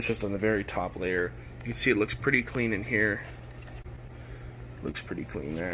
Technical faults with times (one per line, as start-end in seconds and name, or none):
3.82-3.86 short concealed packet loss
4.91-4.95 short concealed packet loss